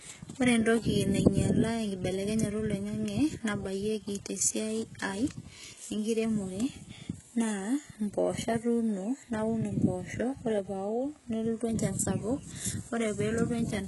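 From start to finish the speech has a synthetic, washed-over top end. Sibilants come out gritty and metallic, and nothing survives above about 11.5 kHz. That's most likely heavy HE-AAC compression at a very low rate, around 12 kbps. The codec keeps only the lower band and fakes the treble by copying lower bands upward under a coarse envelope, so the highs reach up but their harmonics don't line up with the real ones.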